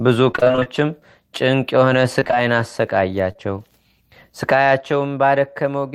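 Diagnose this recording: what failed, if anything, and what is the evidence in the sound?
The network path failed with repeated packet loss (robotic sound) at 0.31 to 0.68 s and 2.20 to 2.34 s. Gaps of up to 24 ms recur closely, and about half of each span is synthetic fill. The speech turns choppy and mechanical as each hole is patched.

Short concealed packet loss follows at 3.32 to 3.37 s and again at 3.37 to 3.40 s. Two brief stretches of speech arrived too late for the decoder. The receiver extended the preceding sound and blended back, leaving a quick smear or wobble.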